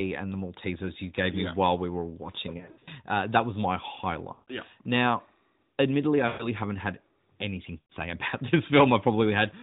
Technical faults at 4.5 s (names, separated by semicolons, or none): lost AMR speech frames